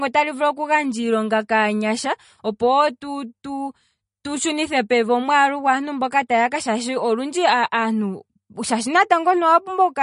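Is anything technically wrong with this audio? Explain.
Yes. Throughout the speech there is plainly audible codec damage, likely from MP3 compression at a low bitrate, which fits roughly 40 kbps. Nothing is present above 10.6 kHz, so the treble is cut off sharply. With too few bits, the encoder drops weak frequency lines, and they flicker in and out between frames. The result is a watery, swirly texture, metallic chirps on s sounds, and smeared consonant attacks.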